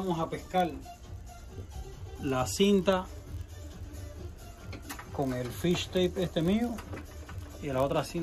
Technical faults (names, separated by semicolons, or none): block size mismatch (padded)